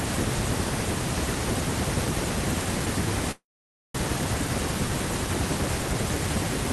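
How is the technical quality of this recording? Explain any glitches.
Call audio freeze, 3.31–3.97 s: packets likely stalled, emptying the jitter buffer; sound fades into 530 ms of silence, resuming intact 0.63 s late.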